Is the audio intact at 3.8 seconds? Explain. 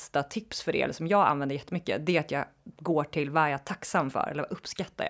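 Yes, the audio is intact at 3.8 seconds, with no dropout, click, distortion or other fault at that point.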